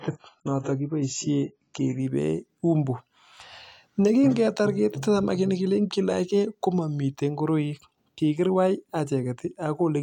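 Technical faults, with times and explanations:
0.0 to 2.0 s, adaptive stream starting at a low bitrate: for the first two seconds the speech has nothing above 7.5 kHz and sounds dull and smeared, with stronger coding artefacts, then clarity returns in one sudden step with no gap. The player began on a cheap version of the stream, which fits AAC at around 16 kbit/s, and switched to one near 96 kbit/s once it had measured the connection. Unlike a network dropout, nothing is missing, and the change happens once, right at the start.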